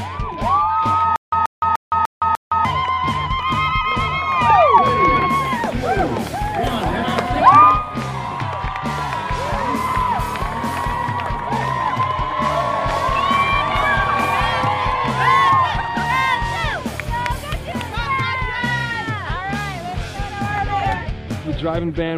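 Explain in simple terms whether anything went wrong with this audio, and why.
From 1.16 to 2.65 s there's a stutter with silent gaps: a 133 ms snippet repeats five times, each followed by 165 ms of silence, likely a stalled stream.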